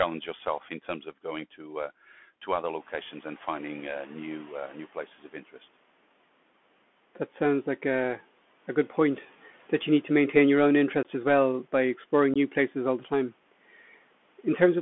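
Throughout, the speech sounds thin and muffled, with scratchy s sounds and a granular hiss beneath it. This is the Bluetooth CVSD headset codec, whose narrow 200 Hz to 3.4 kHz band fits a 64 kbps one-bit link.

From 2.79 to 5.07 s, the room noise, which jumps by about 14 dB around 3 s, comes through with little reduction at first and then sinks by about 10 dB. The noise suppressor is catching up, its estimate taking 2.28 s to adapt.

At 11.03 to 11.05 s and again at 12.34 to 12.37 s, the speech has abrupt holes of 18.8 ms each, which points to unconcealed Bluetooth headset packet loss: a handful of voice packets vanished and silence or an idle pattern took their place.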